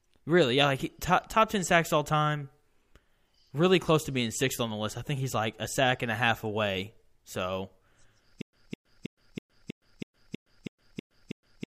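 From 8.42 s to the end, the speech stops moving forward: a fragment of about 207 ms plays, then about 115 ms of dead digital silence, and the same fragment returns at an even pace of one every 322 ms, ten times over. This is a stutter with silent gaps, most likely a stalled player or stream that replayed its last buffered fragment at each retry and then ran empty, so the speech that belonged in those final seconds never plays.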